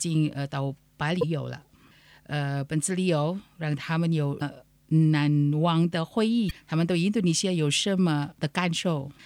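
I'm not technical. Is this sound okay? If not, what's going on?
No. There are two separate problems. First, damaged data in a compressed stream: at 1.19, 4.38 and 6.47 seconds you'll hear a short chirp or blip. Bits of the file got scrambled, so the player briefly lost its place and garbled a moment.

Second, Wi-Fi interference: from 7.87 seconds to the end there's a faint, steady ticking about ten times a second. A nearby Wi-Fi radio pulses every 102.4 milliseconds, and the audio circuitry picks those pulses up as clicks.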